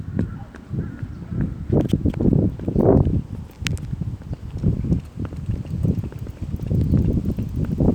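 Nothing goes wrong here at any point; the everyday sounds in the clip come across without a single technical fault to point to.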